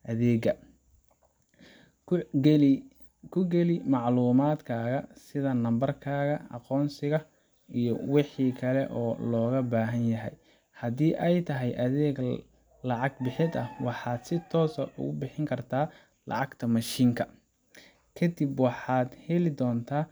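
No dropouts, clipping, glitches or other transport faults turn up anywhere in the recording.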